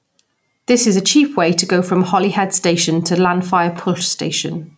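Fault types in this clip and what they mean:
Gain pumping: the level swings by around 5 dB, ducking under each louder syllable, likely from gain set too high with a fast limiter clamping down. The waveform looks squashed and even.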